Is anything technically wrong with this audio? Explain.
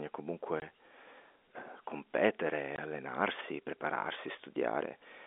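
Yes. Packet loss filled with silence occurs at 0.60–0.62 s and again at 2.76–2.78 s, between "eh competere" and "allenarsi prepararsi". Each gap lasts 20 ms, consistent with one lost packet replaced by silence, so the narrowband telephone-coded speech drops out abruptly with hard edges.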